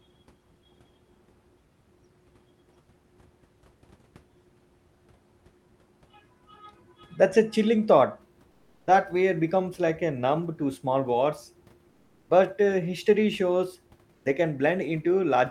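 From 8.51 to 8.87 s, comfort noise replaces the background. The pause becomes steady, featureless hiss, about 12 dB quieter, likely from discontinuous transmission. Then an onset clipped by the voice detector: 8.78 to 8.87 s is lost, so sound starts abruptly.

The same happens from 11.89 to 12.29 s, about 6 dB quieter, with the onset cut at 12.24 to 12.29 s. At 14.13 to 14.25 s the noise drops about 11 dB, and the onset is cut from 14.21 to 14.25 s.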